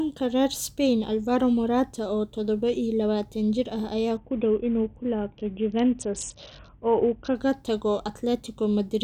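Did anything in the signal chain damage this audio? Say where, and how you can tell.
Yes, at the codec stage over the Bluetooth link. From 4.17 to 7.35 s the speech goes dull and gritty, the classic Bluetooth SBC bit pool drop. It sounds like the bit pool fell from around 28 to about 6, roughly 60 kbps, starving the top sub-bands and coarsely quantising the rest until the rate recovered.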